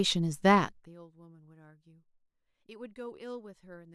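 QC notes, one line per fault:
0.58–0.96 s, zipper noise: a level cut of about 25 dB was applied in coarse, unsmoothed steps, about 200 a second. Each jump in gain puts a tiny click into the speech, and together these form a fast ticking, zipping buzz on top of the sound as it fades down.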